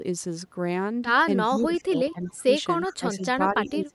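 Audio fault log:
1.49–2.48 s and 2.88–3.95 s: speech suppressed in double talk. The speech dips by about 15 to 20 dB, for around 0.7 s within each span. The likely cause is an echo canceller turning down its own talker while the far side also spoke.
1.59–1.65 s, 2.11–2.31 s and 2.86–2.95 s: echo leak. Short scraps of a copy of the speech arrive 364 ms late, about 15 to 30 dB below it. The likely cause is loudspeaker pickup that the echo canceller did not fully remove, so it was sent back.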